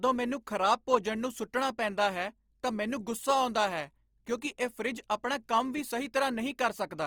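From start to end the speech has a grainy, rough texture, which is most likely Opus compression. The encoder seems to be starved of bits and is filling bands with folded or noisy content, consistent with roughly 24 kbps in music mode. Bandwidth stays full, to about 20.3 kHz.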